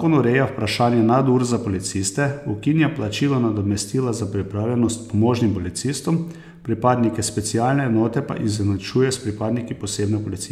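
No dropouts, clicks, distortion or timing errors can be heard anywhere in the recording.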